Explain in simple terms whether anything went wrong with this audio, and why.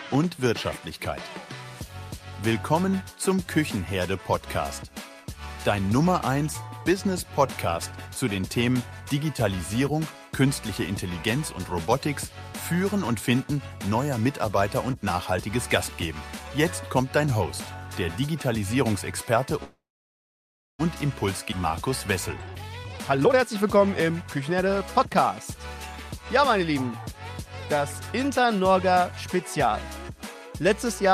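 From 19.63 to 20.81 s the sound stalls: a brief fading buzz, then about a second of near silence, before it resumes exactly where it stopped. This call audio freeze was likely caused by delayed network packets leaving the receiver's jitter buffer empty, so nothing is lost, only paused.

Between 21.51 and 21.54 s the audio jumps forward almost without a gap. This skip ahead means roughly half a second of sound was dropped in transit or discarded by an overfull buffer, and the two sides were joined directly.

From 22.33 to 25.11 s the sound runs noticeably faster, about 125% speed, yet keeps its normal pitch and feels hurried. This jitter buffer speed-up happened because too much audio had piled up, so the receiver trimmed many tiny slices, roughly seven-tenths of a second in total, to catch up.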